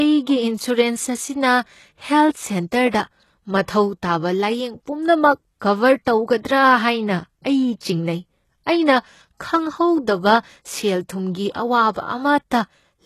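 HE-AAC compression runs throughout: nothing sounds above 12.3 kHz, and the treble appears rebuilt from lower bands, which fits a low bitrate around 16 kbps, making s sounds gritty and lispy, likely from this codec. Pre-echo at 6.05 s: the codec's block noise spreads about 19 ms ahead of a sharp attack, so a brief hiss precedes it and softens its onset.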